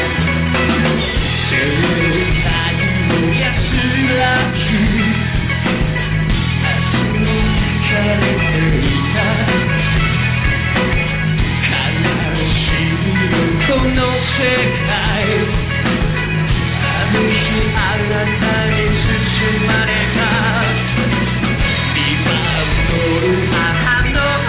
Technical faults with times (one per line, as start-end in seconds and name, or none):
none